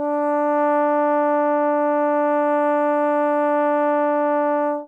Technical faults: none

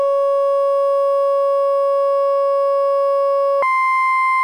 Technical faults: section at the wrong speed

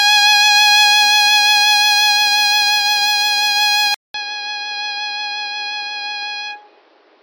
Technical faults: input switched to a poorer device

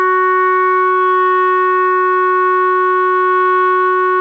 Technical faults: none

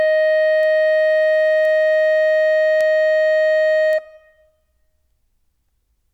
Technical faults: bit error spike

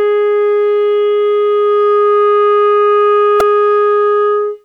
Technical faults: repeated buffer

